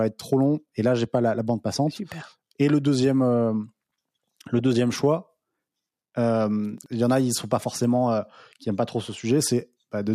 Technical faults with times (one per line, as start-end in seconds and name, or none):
6.78-6.86 chunks out of order